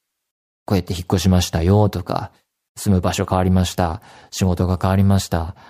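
No technical faults can be heard anywhere in the speech recording.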